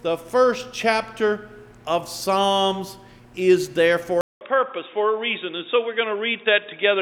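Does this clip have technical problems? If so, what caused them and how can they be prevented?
Yes. At 4.21 s the sound cuts out for 200 ms. It then returns dull and boxy until the end, with nothing above 3.8 kHz. It is about 5 dB quieter, over a new noise floor roughly 40 dB down. The input likely switched to a poorer device. To prevent this, lock the recording input to one microphone and turn off automatic device switching.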